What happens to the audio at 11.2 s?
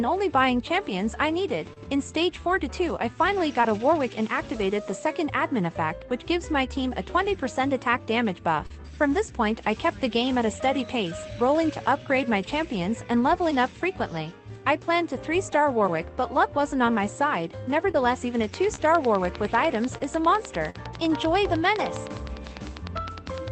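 Nothing goes wrong at 11.2 s; the audio there plays through intact, with no dropout, click, glitch or other fault.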